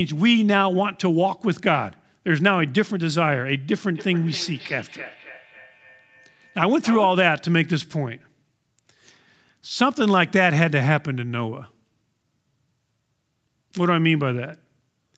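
Feedback echo between two devices from 3.93 to 7.33 s: a second device replays the speech into the microphone, returning about every third of a second, at most about 16 dB below.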